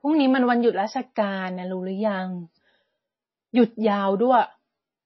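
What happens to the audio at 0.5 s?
At 0.5 s the speech carries the same damage heard throughout the clip: it sounds watery and swirly, with s sounds turned to metallic chirps and consonant attacks smeared. The likely cause is heavy MP3 compression, where a starved encoder zeroes weak frequency lines that flicker on and off between frames. That points to a bitrate near 24 kbps. A spectrogram would show nothing above 5.8 kHz and blotchy, patchy energy below it.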